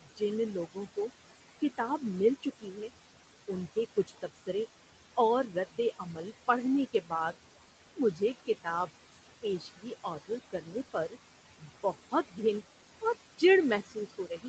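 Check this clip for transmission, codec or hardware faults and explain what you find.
Two faults stand out, and both come from noise suppression on the call path. The background is held down hard throughout. At several points the speech itself is pulled down with it.

Noise suppressor artifacts run through the whole clip. The suppressor lowers any band it judges to be steady noise, frame by frame, by about 17 dB. The room noise sits about 13 dB under the speech. It drops away in the gaps and returns beneath the talking.

Speech cut by the noise suppressor occurs in seven stretches: 0.01 to 1.79 s, 2.42 to 2.90 s, 3.48 to 4.49 s, 5.51 to 6.18 s, 6.93 to 7.34 s, 7.96 to 12.4 s, and 13.01 s to the end. In each, the suppressor mistook quiet parts of the speech for noise. It cut them by about 12 to 19 dB, with the deepest drop in the long 7.96 s stretch. Only brief moments are hit, about 0.15 to 0.3 s in most stretches and close to a second in the long one. 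Soft consonants and word endings sound swallowed or faint. The band above about 8 kHz is empty, as the call path's bandwidth limit would leave it.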